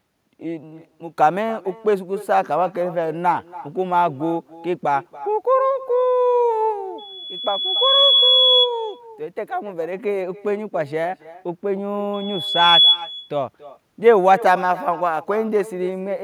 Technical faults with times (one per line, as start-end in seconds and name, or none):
0.00-16.24 echo with no canceller
6.98-8.70 loudspeaker feedback squeal
12.13-13.03 loudspeaker feedback squeal